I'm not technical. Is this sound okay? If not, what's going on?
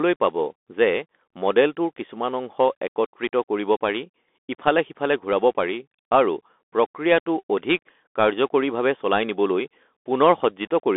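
No, not quite. The whole recording, start to finish, went through a Bluetooth CVSD headset codec, the old narrowband link that cheap headsets fall back to for calls. It describes the sound only as a rapid stream of small up or down steps, so fine detail gets lost and leaves a plainly audible gritty roughness. It also throws away everything above about 3.8 kHz and thins the bottom below about 250 Hz, which is why it sounds boxy and phone-like.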